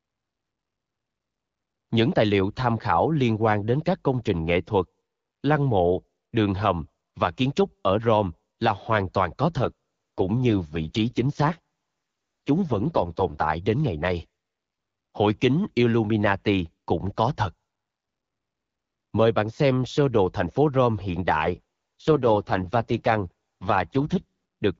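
From 9.57 to 13.44 s, and again from 21.41 s to 24.24 s, the speech turns rough, buzzy and synthetic: an AMR rate drop, where a weak radio link pushes the codec to spend fewer bits on the sound itself. The texture fits a fall from 12.65 to 6.6 kbit/s. On a spectrogram the 7 kHz band edge holds steady, but harmonics smear and blur. The waveform shows no gap.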